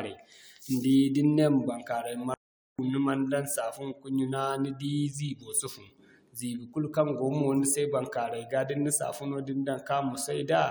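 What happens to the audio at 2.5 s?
A playback stall, likely the player running short of data or being blocked, cuts the speech to silence from 2.34 to 2.79 s, a 0.45 s gap.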